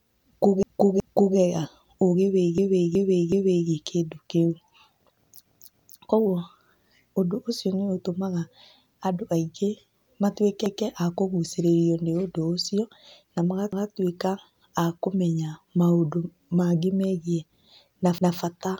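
The speech stutters six times from repeated frames. At 0.63 to 1.37 s, a 0.37 s block plays twice more. At 2.58 to 3.69 s, the same length repeats three extra times. At 5.46 to 6.02 s, a 0.28 s block plays twice more. Single 0.19 s repeats follow at 10.66, 13.73 and 18.18 s. The decoder received the same compressed frames again and replayed them. Block lengths fit frames of about 93 ms. Each repeat lengthens the audio, adding about 3 s overall.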